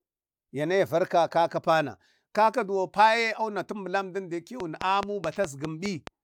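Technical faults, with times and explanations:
4.60–6.08 s, train of clicks: about seven near-identical pops arrive evenly at 4.76 per second, standing well above the speech. The likely cause is interference or a faulty connection or power supply injecting repeated pulses. The waveform shows regularly spaced sharp spikes, and the spectrogram shows thin full-height vertical lines.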